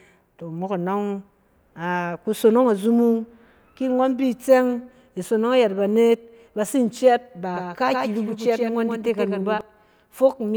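From 7.55 s to 9.61 s, a doubled audio track appears, most likely because the same speech is being captured a second time through a slower path and mixed back in. A second full-band copy trails the original by roughly 150 ms, only about 5 dB quieter, so every syllable is followed by a flat, dry repeat with no decay or room colour. The copy cuts in and drops out abruptly at those two points.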